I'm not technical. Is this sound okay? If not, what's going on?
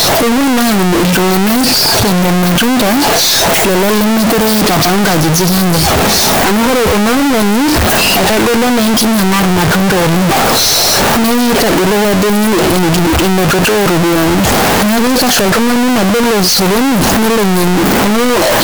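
No. Throughout the whole clip there is a float read as integer fault. The speech was likely stored as 32-bit floating-point numbers but played back as 32-bit whole numbers, so each sample's sign and scale markers end up deciding its level. That squashes the waveform into a near-square shape at an almost fixed, high level, making everything very loud and harsh, with background noise as loud as the speech, though its rise and fall in pitch still comes through.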